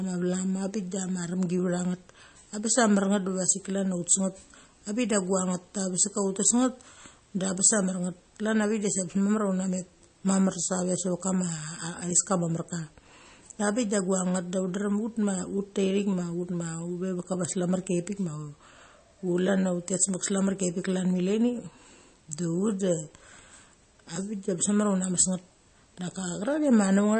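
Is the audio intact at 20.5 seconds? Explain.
No. At 20.5 seconds the speech carries MP3 compression damage, as it does throughout the clip. Nothing is heard above about 8.3 kHz, and the remaining sound has a watery, swirly quality. That points to a low bitrate, around 32 kbps, where the encoder likely ran short of bits, cut the treble at a fixed point and dropped weak frequency lines that flicker on and off between frames. That flickering sets it apart from a plain low-pass filter.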